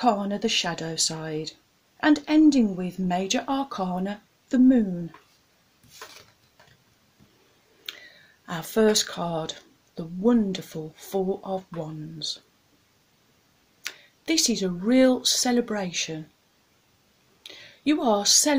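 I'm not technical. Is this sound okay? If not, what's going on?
Yes, nothing stood out as wrong when listening to this sound.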